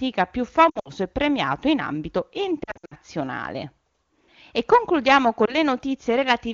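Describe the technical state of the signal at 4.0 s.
At 4.0 s the speech is intact, carried by the AMR wideband (HD Voice) codec at 23.85 kbit/s with no fault at that moment.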